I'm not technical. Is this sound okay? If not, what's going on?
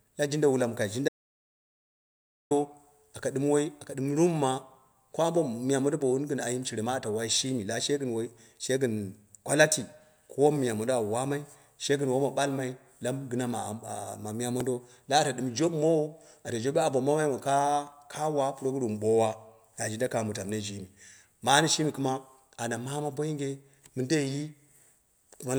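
No. Just after "jin wula mɨ kai", from 1.08 to 2.51 seconds, the speech vanishes into complete silence for about 1.4 seconds. This is an audio dropout to silence, likely from the input briefly disconnecting. Unlike a natural pause, even the room's background hum disappears.

At 14.6 seconds, and again at 17.92 seconds just before "ka wa", there is a tiny click or buzz. This is a repeated buffer: a sliver of sound lasting about a thousandth of a second played again, once and then twice. Nothing goes silent.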